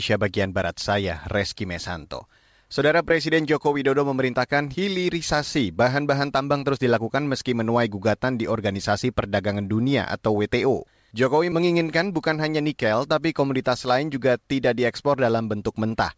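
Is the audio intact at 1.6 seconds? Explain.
Yes, the speech at 1.6 seconds is intact, passing through the call path as normal with its usual coding and nothing above 8 kHz.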